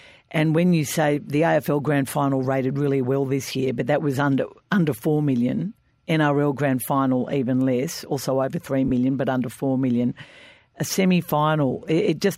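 Lost LE Audio frames at 8.88 to 8.91 s in this speech clip, between "less also over three" and "but under four million": a 30 ms gap, which fits three 10 ms LC3 frames, where the decoder repeats the last spectrum with randomised signs, leaving a brief noisy smear.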